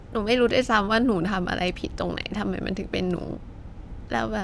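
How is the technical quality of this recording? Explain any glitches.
The speech signal is technically sound, with no glitches, dropouts or other transmission or processing faults to explain.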